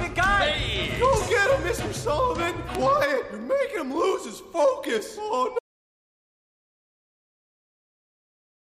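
At 5.59 s the sound just stops dead and never comes back: an audio dropout to silence lasting the final 3.0 s. It's silent with no room tone, so the input was likely lost while the recorder kept writing.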